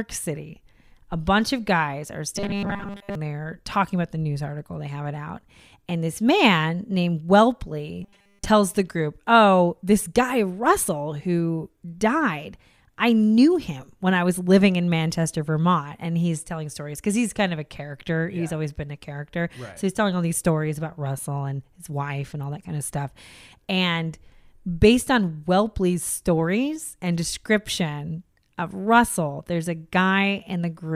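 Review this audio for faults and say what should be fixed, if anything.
Robotic sound from repeated short buffers at 2.36–3.15 s and 8.03–8.46 s turns the speech into a rigid, metallic 200 Hz buzz. The effect covers most of the first stretch and all of the second. The buzz likely comes from a 5 ms segment looping while new audio failed to arrive. Deeper buffering or a steadier input stream would prevent it.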